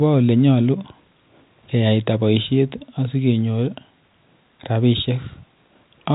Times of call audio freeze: none

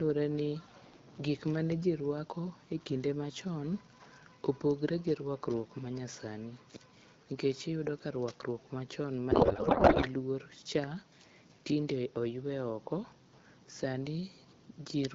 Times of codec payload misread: 9.31-10.09

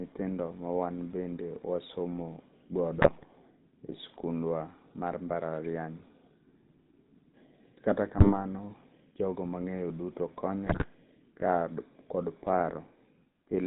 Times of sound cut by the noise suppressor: none

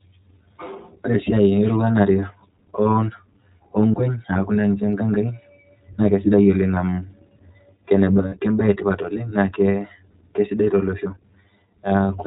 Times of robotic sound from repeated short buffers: none

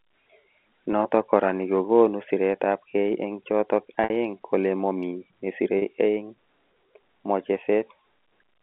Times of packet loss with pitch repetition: 4.04-4.10, 5.78-5.82

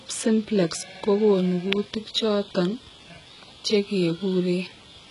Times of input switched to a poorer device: none

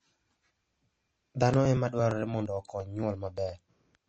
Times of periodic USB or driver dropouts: 0.16-3.95

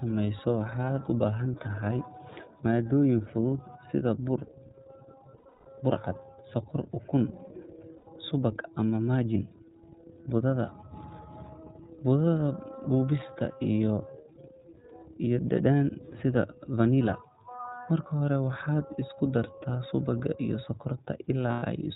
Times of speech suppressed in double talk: none

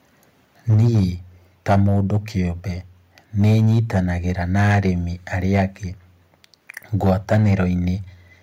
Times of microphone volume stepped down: 0.74

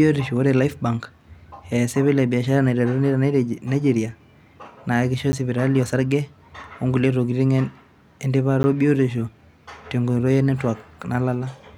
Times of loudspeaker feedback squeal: none

